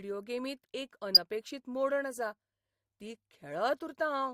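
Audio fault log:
1.15 to 1.17 s, corrupt frame decoded: A short, harsh burst cuts into the speech just before "मोडण आसा ती". It lasts about 26 ms and spans what sounds like a few codec frames. Damaged bits in those frames were decoded as if valid. Misread gains and spectral codes pushed energy into the wrong frequencies. The result is a squeaky, noisy blip unrelated to the surrounding speech. It peaks around -10 dBFS.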